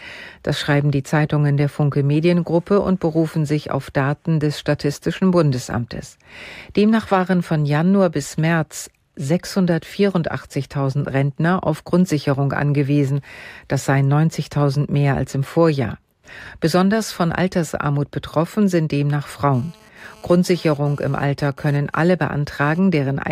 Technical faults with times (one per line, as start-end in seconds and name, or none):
19.54-22.79 GSM phone buzz